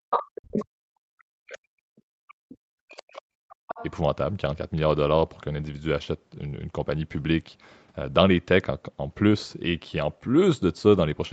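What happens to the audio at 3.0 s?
Around 3.0 s the speech is still held down, dipping by around 40 dB at its deepest across the span from the start to 3.76 s. That is speech suppressed in double talk: with both sides talking, the echo canceller likely could not tell the talker from the loudspeaker echo and attenuated everything. Within that, from 2.94 to 3.02 s, a brief faint scrap of a second voice sits roughly 25 dB under the speech. This is the other side's voice leaking through, likely loudspeaker playback that the echo canceller left in the microphone signal.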